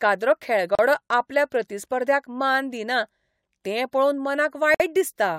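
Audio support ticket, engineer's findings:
Gap at a join of encoded pieces in the speech, 0.75–0.79 s (36 ms, before "आपल्या प्रतिस्पर्ध्याक मान दिना") and 4.74–4.80 s (54 ms, after "तें पळोवन"). Separately encoded segments were joined untrimmed, leaving encoder delay and last-frame padding. Spectrogram shows full-band blank columns; waveform shows flatline with smeared edges.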